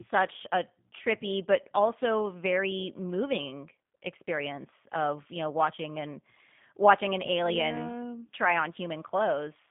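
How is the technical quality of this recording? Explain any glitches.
The quality is limited by one fault present throughout: G.729 codec damage. Across the whole clip, the speech is squeezed into a telephone band of roughly 150 Hz to 3.5 kHz, with nothing above 3.6 kHz. The codec rebuilds each short frame from a vocal tract model, a pitch predictor and a few pulses. The damage is plainly audible. The speech sounds muffled, rough and slightly synthetic, which fits an 8 kbit/s G.729A stream.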